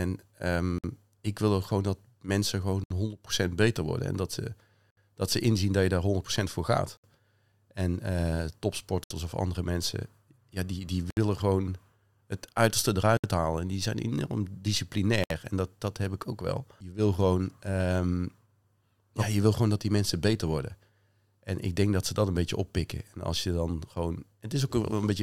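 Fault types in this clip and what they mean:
Gap at a join of encoded pieces: two-second segments encoded separately were joined untrimmed, so encoder delay and padding leave 54 to 67 ms silences before the speech resumes.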